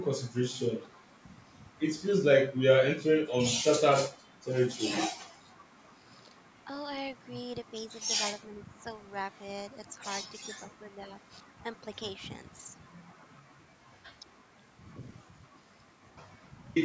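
From 0.74 to 0.93 s there's a faint echo leak: a ghostly copy of the speech trailing about 368 ms behind, around 40 dB down. It's likely the far end's echo canceller missing a bit of its loudspeaker pickup and sending it back.

Then the speech dips while the other side talks, which is speech suppressed in double talk. There's a sharp dip of around 20 dB at 2.98 to 3.04 s, a gentler sag of a few dB from 8.47 to 8.74 s, and short drops at 9.91 to 10.01 s and 10.44 to 10.52 s. This is likely the canceller ducking everything when it couldn't separate its own talker from the echo.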